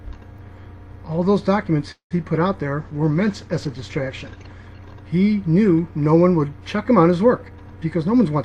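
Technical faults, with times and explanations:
1.91–2.13 s, call audio freeze: the last sound stretches into a fading buzz, then about 120 ms of silence. Likely a jitter buffer underrun, and the audio then resumes intact, delayed rather than cut.
2.79–4.75 s, call bitrate drop: the encoder falls from 48 to 14 kbps and the bandwidth narrows from 20 kHz to 12 kHz, so the sound turns coarse and duller without any gap.
7.48–8.44 s, jitter buffer speed-up: short pitch-period pieces are removed, trimming around 150 ms, so the sound runs at 117% speed with unchanged pitch, hurried rather than chipmunk-like.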